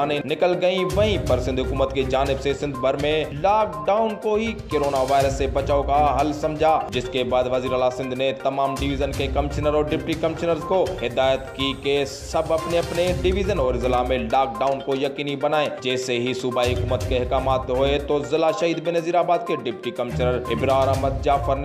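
No technical faults can be heard at any point in the audio.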